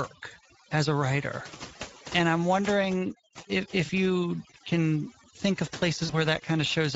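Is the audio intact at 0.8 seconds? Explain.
No. At 0.8 seconds the sound carries two faults, and both run through the whole clip.

The first is overdone noise removal. A noise reduction stage was pushed too hard. Any frequency band that comes near its noise estimate gets pulled far down or cut out. Quiet parts of the speech are removed along with the noise. The background drops and breaks up into small twinkling specks.

The second is Speex codec damage, and it is plainly audible. Speex is a CELP speech codec from older VoIP and game chat. It rebuilds the voice from a model plus a coarsely coded excitation signal. The degree of damage fits a middle setting of about 16.8 kbps. Too few bits go to that excitation. The speech at this point sounds noisy and hoarse.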